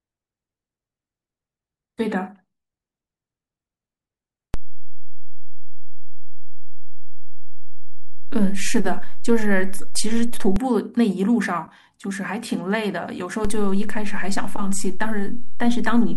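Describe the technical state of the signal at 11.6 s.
At 11.6 s the speech signal is intact, with no audible fault at that moment.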